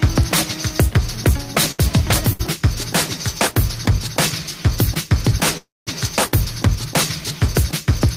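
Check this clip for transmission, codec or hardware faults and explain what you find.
There are three network-timing faults here: two short stalls from late packets and one longer call audio freeze.

At 1.71 to 1.81 s and again at 2.33 to 2.41 s there's a short stall from a late packet. The jitter buffer ran dry, so the receiver held the last sound for about 72 ms and 66 ms, giving a slightly stretched, faintly buzzy hold before playback resumed where it left off.

From 5.57 to 5.89 s there's a call audio freeze. The sound stretches into a fading buzz that drops to silence for about 200 ms, then carries on from the same point. The cause is likely packets held up in transit, adding a gap of roughly 295 ms.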